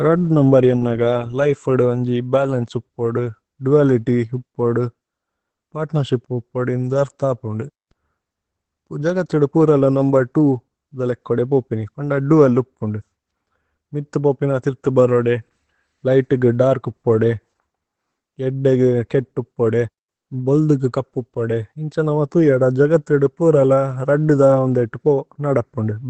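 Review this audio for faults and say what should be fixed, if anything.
Opus voice compression throughout: low-rate SILK coding, consistent with a bitrate around 12 kbps, removes everything above 8.4 kHz and leaves the speech muffled and hoarse. To prevent it, encode at a higher Opus bitrate or keep an uncompressed source.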